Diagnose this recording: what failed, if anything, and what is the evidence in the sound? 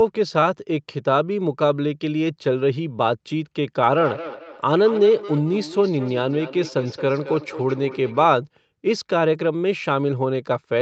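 The failure sits in the acoustic loop around the call: there's feedback echo between two devices from 3.87 to 8.31 s. Each bit of speech comes back at a steady spacing of about a fifth of a second, the loudest return sitting about 14 dB under the direct speech. What's happening is one device playing out what the other's mic sent, and that mic hears it again; each echo canceller only subtracts its own playback, so this loop slips through. The codec's 8 kHz band limit is expected.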